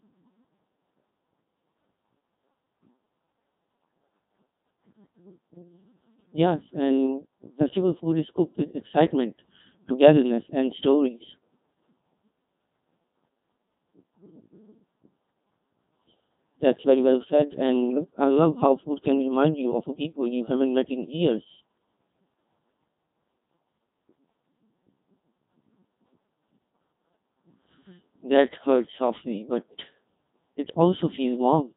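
From start to end the speech has passed through the Codec 2 vocoder at 2.4 kbit/s, and the damage is heavy. Only pitch, voicing, energy and a coarse spectral envelope survive. The decoder rebuilds the voice from sine waves rather than the original waveform, so it sounds robotic and buzzy throughout. Anything beyond a single voice comes out smeared and mangled.

From 17.90 to 18.04 s, bit errors on digital voice radio corrupt the stream. The sound fits about two frames being hit at an error rate of roughly two percent. At this low rate each flipped bit controls a frame's pitch, level, voicing or spectrum. The synthetic voice therefore jumps abruptly in pitch and loudness, and its tone colour shifts. It breaks into a brief warbling, bleeping burst of robotic gibberish.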